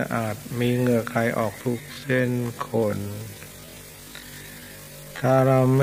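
Software most likely stretched the audio from 1.6 s to the end of the clip to fill a longer slot, a time-stretched section played at about 0.51 times normal speed, nearly half pace. To hold the pitch steady, the process repeated short slices of the sound instead of lowering it, so at 1.6 s the pace abruptly drops by half while the pitch stays the same, and the remainder drags, with each moment drawn out.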